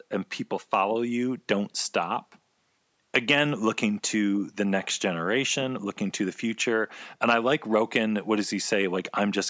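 Nothing technically wrong turns up in this stretch of speech; it has simply come through a call's microphone processing, so the lowest bass is trimmed off and nothing reaches above 8 kHz, which is just how that path normally sounds.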